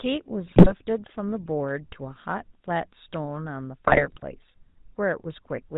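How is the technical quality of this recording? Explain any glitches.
The technical quality is poor: the speech is band-limited and rough all the way through, with two short bursts of heavier damage.

Buzzy, gravelly roughness runs through the whole clip, with nothing above 4 kHz. This is the GSM full-rate codec, whose character fits its 13 kbps rate. It rebuilds the voice from a vocal-tract model driven by coarse, regularly spaced pulses, and discards the upper band entirely.

From 0.46 to 0.72 s and again from 3.86 to 4.25 s, the speech breaks into squawks, pops and gargling. These are GSM bit errors: corrupted filter, pitch and gain values distort the spectrum or spike the level frame by frame. The second burst is longer.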